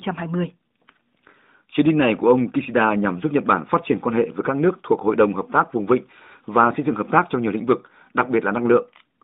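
No technical faults are audible.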